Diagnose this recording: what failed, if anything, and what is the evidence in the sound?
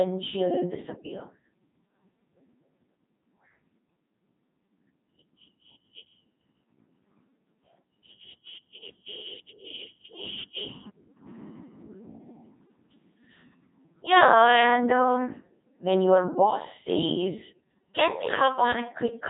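The failure is at the codec stage: the speech has been through a Codec 2 vocoder for its whole length, and the heavy damage fits a rate of about 2.4 kbit/s. Only pitch, voicing, energy and a coarse spectral envelope survive; the decoder rebuilds the speech from sine waves rather than the original waveform. The result is a robotic, buzzy timbre throughout, with nothing above 3.8 kHz.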